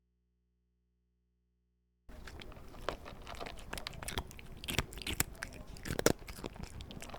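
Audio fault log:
0.00–2.09 s, audio dropout to a faint residue. The clip opens already inside the dropout. For the first two seconds the wanted sound is missing, and only a low mains hum sits in the gap, roughly 40 dB below the normal level. At 2.09 s the sound returns abruptly, with no fade. The likely cause is a signal break upstream while the input stayed live, so the open input picked up hum instead of silence.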